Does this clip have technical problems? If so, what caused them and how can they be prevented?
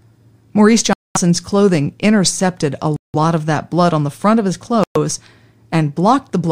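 Yes. The speech drops to silence three times: from 0.93 to 1.17 s (a gap of about 222 ms), 2.96 to 3.15 s (about 176 ms), and 4.84 to 4.96 s (about 119 ms). These are most likely Bluetooth stalls, where radio interference delays packets, the headphones' buffer empties, and playback halts until retransmitted packets arrive. Keeping the phone close with a clear line of sight, away from busy 2.4 GHz sources, prevents them.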